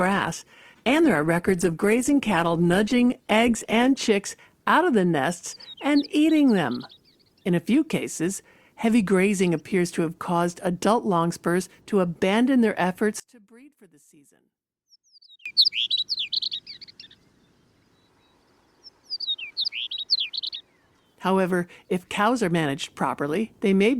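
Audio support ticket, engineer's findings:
Adaptive stream starting at a low bitrate, 0.0 to 4.0 s. Top end missing or synthetic, stronger codec smearing, then an abrupt quality jump at 4.0 s with no dropout. The player opened on a low-bitrate rendition to start fast, then switched up once throughput was measured. The sound points to an Opus-type codec at roughly 16 kbit/s stepping up to about 64 kbit/s.

Level collapse, 13.20 to 15.46 s. Drop of about 29 dB, common content including background nearly gone, leaving a faint residue. Likely one channel inverted in the stereo path, causing cancellation of common content when the channels are summed to mono. Only the interchannel difference survives until 15.46 s.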